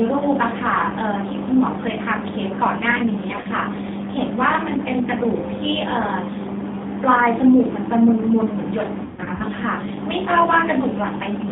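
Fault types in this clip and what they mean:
G.729 codec: the call was carried by an 8 kbit/s speech codec that rebuilds each 10 ms frame from a vocal tract model, a pitch predictor and a few pulses, so the voice sounds plainly rough and synthetic, confined to about 150 Hz to 3.7 kHz.
VoIP packet loss concealed by the speech codec: packets went missing and the decoder filled the gaps by extending its last pitch and filter at falling gain, smearing the voice briefly at 3.42 s and through a longer, broken stretch from 9.04 to 9.43 s.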